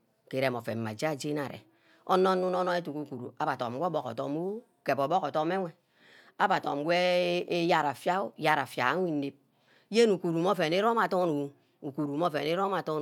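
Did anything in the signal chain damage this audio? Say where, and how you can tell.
No, nothing along the chain from capture through to playback has left an audible mark on this speech recording.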